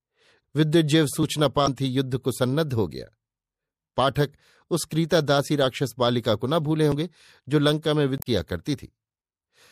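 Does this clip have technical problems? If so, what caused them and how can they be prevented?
Yes. The speech has a watery, swirly sound throughout, most likely MP3 compression at a low bitrate around 64 kbps. Weak frequency lines switch on and off between frames. Unlike damaged data, this coloration is continuous rather than confined to brief spots. Encoding at a higher bitrate prevents it.

Audio missing between chunks is heard as abrupt skips at 1.23, 6.92 and 8.79 s, each dropping a very short piece. The likely cause is lost audio at boundaries between 3-second processing chunks. A recorder that hands chunks over without dropping samples prevents this.

Damaged data in a compressed stream produces brief glitches from 1.64 to 1.68 s and from 8.17 to 8.27 s. The decoder misreads corrupted frames and resyncs. Error-checked transfer and storage prevent it.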